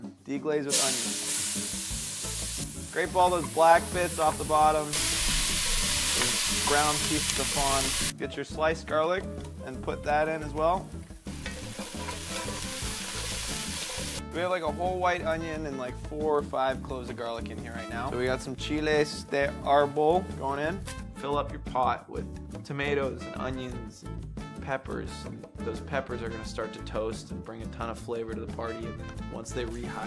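No technical faults can be heard anywhere in the audio, and the signal stays steady and intact throughout.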